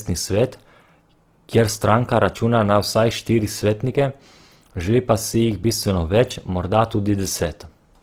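Throughout the speech, plainly audible Opus compression, likely from a low-bitrate CELT encode around 16 kbps, turns tones rough and grainy as starved bands are filled with folded or noise energy. A spectrogram shows content to 20.2 kHz with few holes but smeared, speckled harmonics.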